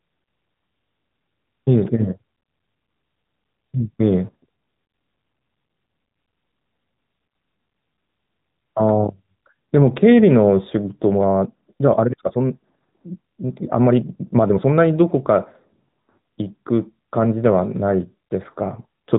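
From the start, the speech carries AMR narrowband mobile codec damage: nothing passes above 4 kHz, and the voice has a plainly buzzy, synthetic edge that fits a 10.2 kbps mode. A spectrogram shows a hard ceiling at 4 kHz, with an empty band above it for the whole clip.

From 11.07 to 14.73 s the pace jumps to about 1.59 times normal while pitch holds steady, sounding rushed. This is likely a time-stretched section, squeezed by dropping short pieces. The waveform shows tighter syllable spacing there, with small seams where pieces were cut out.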